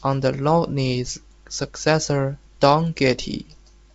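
The speech has no technical faults and comes through as G.722 wideband telephone coding at 64 kbit/s, with its band stopping at about 7.7 kHz as that coding would have it.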